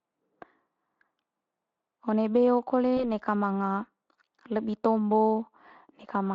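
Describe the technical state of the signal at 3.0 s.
At 3.0 s the speech briefly smears into a buzzy tone or a coloured noise that fades and then sounds weak or distorted until about 3.10 s, a span starting near 2.97 s. This is VoIP packet loss concealed by the speech codec: one 20 ms frame went missing, and the Speex decoder, whose coding damage is light, filled the gap by extending its last pitch and filter with falling gain. Because each frame builds on the one before, the damage outlasts the 20 ms hole.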